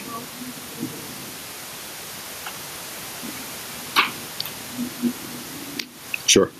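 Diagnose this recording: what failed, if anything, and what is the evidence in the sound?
Gain pumping runs throughout. The level swings around 10 dB under speech; likely excessive input gain driving a fast limiter. The waveform shows a flattened, squashed envelope.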